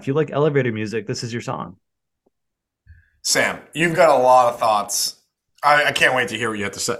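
A recording of speech, with no technical faults to report. Nothing in it needs a time, a cause or a fix.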